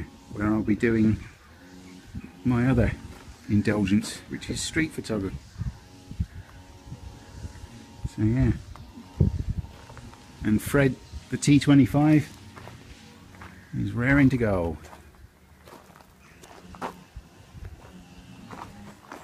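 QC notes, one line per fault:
5.29 s and 16.43 s, compressed frames skipped: a run of compressed frames never reached playback, dropped as missing or damaged, so the audio leaps ahead, about a fifth of a second at 5.29 s and about 0.15 s at 16.43 s.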